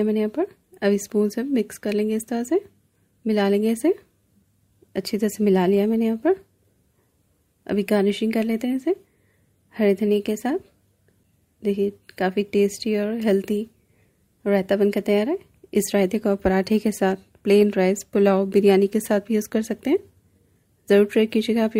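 At 20.89 s, compressed frames are skipped. The audio jumps ahead by about one 20 ms frame.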